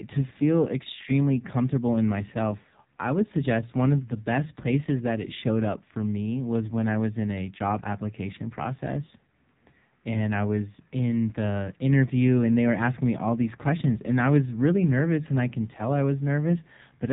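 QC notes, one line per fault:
Throughout, AMR narrowband mobile codec. Nothing above about 3.8 kHz survives, so the speech sounds thin and phone-like. Heavy damage leaves it buzzy and synthetic, as a few coded pulses per frame rebuild each sound. This points to a low mode near 5.9 kbps.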